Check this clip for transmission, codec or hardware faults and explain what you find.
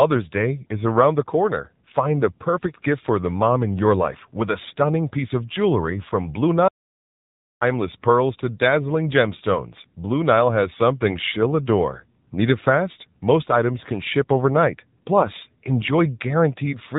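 Two faults stand out: mobile-codec coloration across the whole speech clip, and one short dropout to silence.

AMR narrowband mobile codec, throughout. Nothing gets past roughly 3.8 kHz, so the speech sounds boxed-in and phone-like. The codec doesn't store the waveform itself. It models the vocal tract and excites it with a handful of pulses per 5 ms subframe. The damage is plainly audible, a buzzy, synthetic edge on voiced sounds, which fits a low AMR-NB mode around 7.4 kbps.

Audio dropout to silence, 6.68 to 7.61 s. The speech cuts off mid-flow, and for about 0.93 s there's dead silence with no room tone at all, before it picks up again at "pearls to dazzling gemstones". The complete silence means silence was being written while the input was missing, so whatever was said in that stretch is gone. The likely culprit is a momentary input loss, such as a link failure, a device disconnect or a stray mute.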